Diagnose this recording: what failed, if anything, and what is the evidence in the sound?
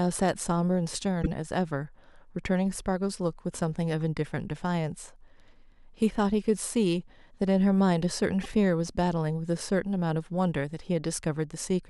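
The fault is repeated frames, at the codec or storage stage. The speech stutters briefly twice, once between 1.22 and 1.27 s and again between 8.43 and 8.46 s. Each time, a block of 26.1 ms plays a second time, which fits a single compressed frame being written or sent twice. The decoder simply replays that slice. Each repeat adds 26.1 ms, so the recording runs slightly longer than the original.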